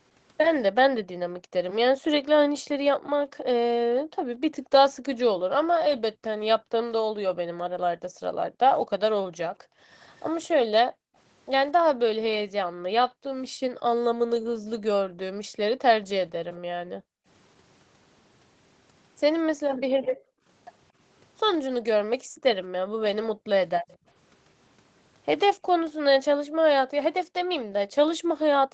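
A speech recording over a call path in which the background is gated by the echo canceller: the room sound drops by up to about 40 dB from 0.75 to 15.61 s (roughly seven seconds of that span affected), then at 16.89–17.27 s, 19.47–20.46 s, 21.74–23.47 s and from 25.58 s to the end, as the canceller clamps the microphone while the far-end loudspeaker plays. A faint echo leak appears at 10.19–10.48 s and 23.88–23.98 s: a copy delayed by 231 ms, roughly 30 to 35 dB below the speech, likely residual loudspeaker pickup the canceller failed to remove.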